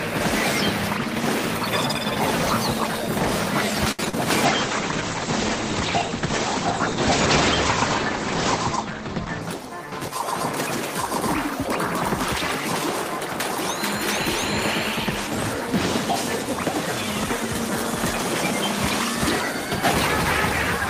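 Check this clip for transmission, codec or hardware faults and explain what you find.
Three network-related faults turn up, all clustered around four seconds, with the last lasting about five seconds.

A short stall from a late packet at 3.91 to 4.01 s: the jitter buffer emptied, so the last sound was stretched about 73 ms before resuming.

Short concealed packet loss at 4.05 s and 4.09 to 4.15 s: about 20 ms and 40 ms never arrived, so the decoder extrapolated, leaving a brief smear.

A call bitrate drop from 4.46 to 9.49 s: the encoder fell from 40 to 12 kbps, narrowing bandwidth from 20 kHz to 8 kHz, so the audio turns muffled and coarse.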